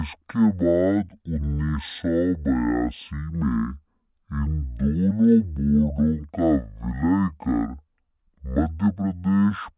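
From start to finish the speech runs at half speed and a full octave low, 12 semitones down, the mark of a wrong sample rate. The samples are clocked out at half the rate they were captured at, with no conversion, which fits 16 kHz audio played at 8 kHz. It sounds slow, deep and dragging. A spectrogram shows every harmonic and formant at half its normal frequency, with the content topping out near 4 kHz. The waveform's syllable envelopes are stretched to twice their usual length.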